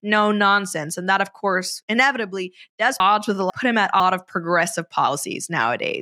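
From 3.0 to 4.0 s, chunks out of order: a 500 ms block plays one chunk late, leaving three hard joins, seen as waveform steps and vertical spectrogram streaks.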